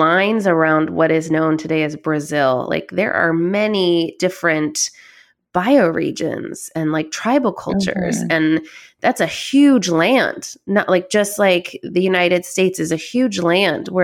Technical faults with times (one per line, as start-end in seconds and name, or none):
0.00-2.00 de-emphasis applied wrongly